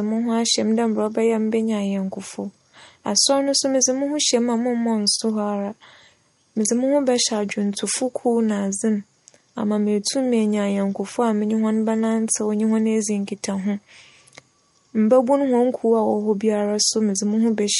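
From start to finish the speech carries plainly audible damage that likely comes from MP3 compression. Nothing sounds above about 11.2 kHz, so the top of the sound is sliced off flat. The encoder seems starved of bits, which fits a low rate near 48 kbps. It drops quiet frequency detail and lets it flicker in and out between frames. The result is a watery, swirling texture, with metallic chirps on s sounds and soft, smeared consonant onsets.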